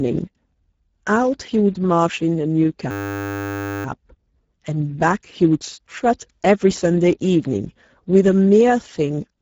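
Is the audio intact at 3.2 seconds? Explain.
No. At 3.2 seconds the sound sits inside a system hang loop that runs from 2.91 to 3.85 s. The machine or its driver stalled while the audio hardware kept replaying the same tiny stretch of its ring buffer, about 10 ms long, which fits a very short buffer. Repeating that slice exactly, 94 times, turns it into a steady buzz at 100 Hz. Unlike a dropout, nothing goes silent. Unlike a longer-buffer hang, there is no audible machine-gun stutter, only one fixed tone-like drone until playback recovers.

Underneath, and throughout the clip, the Speex codec damage is plainly audible. The speech sounds hoarse and noisy, which points to a low setting of roughly 10 kbps that leaves little for the excitation signal. Nothing is present above 7.7 kHz, and the upper band that remains is a shaped, noise-like fill rather than real detail. That even, constant coarseness sets it apart from the hang loop's brief, pitched buzz.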